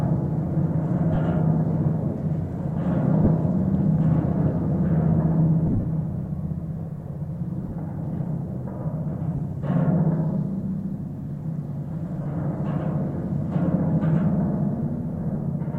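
Lost LE Audio frames occur at 1.15–1.17, 3.24–3.27, 5.67–5.84, 7.62–7.72, 9.37, 12.22–12.26 and 15.34 s. Each time, the LC3 decoder fills the gap by replaying the last spectrum with random signs, so tonal sound briefly smears into a noisy hiss. The worst is at 5.67 s, where about 120 ms goes missing in scattered bursts over 165 ms, the longest run roughly 40 ms, leaving a grainy, fading patch. At 7.62 s, 45 ms of short dropouts scatter across 90 ms.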